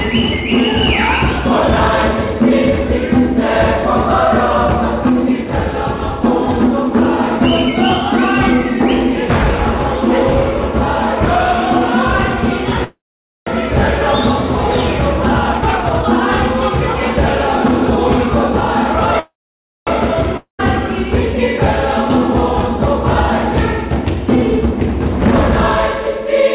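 At 12.84 s the sound stops and a brief buzzy continuation fades into about half a second of silence. At 13.49 s it resumes exactly where it left off, so nothing is lost but roughly 0.62 s of delay is added. This is a call audio freeze, likely caused by packets held up in transit until the jitter buffer ran empty. The receiver stretched the last sound until it faded out, then waited for the late packets.

From 15.53 s to 18.85 s the audio runs hurried at about 118% speed with no change in pitch. This is a jitter buffer speed-up. After delayed packets arrived together, the buffer held more audio than it aims for. To cut that delay, the receiver trimmed many short pitch-period-length pieces in a row, removing about 0.7 s in total.

At 19.19 s a second call audio freeze follows the same pattern. A fading buzz gives way to about 0.56 s of silence, and playback picks up again at 19.89 s with nothing skipped, now about 0.68 s later than before.

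At 20.37 s a short fading buzz and about 0.13 s of silence precede a jump at 20.61 s. About 0.22 s of audio is simply gone. This is a long network dropout, likely a stretch of packets that never arrived. The receiver concealed the hole briefly and then carried on past the missing part.

Throughout, nothing is heard above 4 kHz, which fits a G.711 mu-law call path at 64 kbps.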